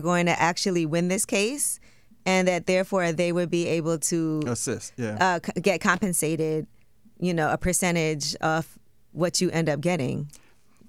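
Loose connector crackle from 5.94 to 6.02 s: a worn or dirty contact briefly makes and breaks, chopping the signal into a short, irregular burst of scratchy crackle.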